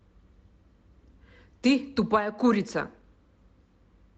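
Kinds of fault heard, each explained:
No faults can be heard in this clip.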